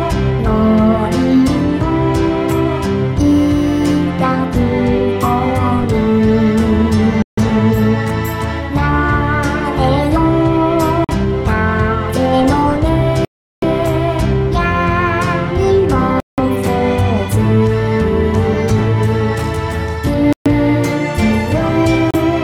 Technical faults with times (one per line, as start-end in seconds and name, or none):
7.22-7.38 Bluetooth stall
11.04-11.11 Bluetooth stall
13.25-13.64 Bluetooth stall
16.20-16.39 Bluetooth stall
20.33-20.47 Bluetooth stall
22.11-22.15 Bluetooth stall